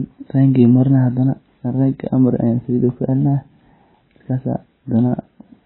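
Speech runs its full length under heavy MP3 compression, likely from a very low bitrate around 16 kbps: treble stops dead at 4 kHz, and weak frequency lines flicker between frames, giving a watery, swirling texture and chirpy s sounds that a simple low-pass filter would not cause.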